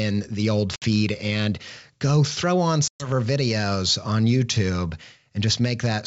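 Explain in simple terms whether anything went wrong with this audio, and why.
Packet loss on an ADPCM call: a few packets vanished around 0.76–0.83 s (60 ms, after "the old") and several more around 2.88–3.10 s (120 ms, after "and go throw on"). Each gap became abrupt silence, and the decoder briefly lost sync with the sender.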